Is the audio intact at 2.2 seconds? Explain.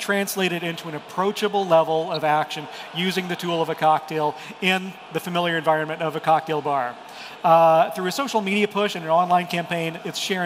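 Yes, but only just. A brief DAB burbling blip from 2.14 to 2.17 s, likely from a couple of frames corrupted by leftover bit errors, puts short blips of noise in single sub-bands.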